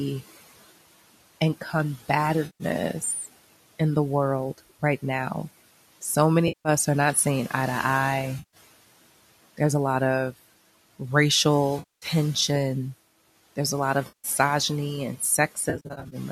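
Speech, with room noise sitting about 19 dB below the voice, is processed by a noise suppressor that pulls the background down by about 17 dB, producing noise suppressor artifacts throughout: the residual noise pumps between phrases and rises under the voice. At 3.01 to 3.26 s the same suppressor produces speech cut by the noise suppressor, dipping parts of the voice by up to about 10 dB over roughly 150 ms so they sound swallowed. AAC frame loss with concealment appears at 2.46 to 2.64 s, 6.48 to 6.69 s, 8.39 to 8.57 s, 11.79 to 12.06 s and 14.08 to 14.28 s, lasting 140 to 230 ms each. The decoder papers over these gaps with smeared, phasey fill, and the gap lengths fit roughly 10 ms frames, likely from a low-delay AAC-ELD codec. A final burst from 15.70 to 16.16 s scatters 270 ms of loss across 420 ms, with the longest run around 70 ms.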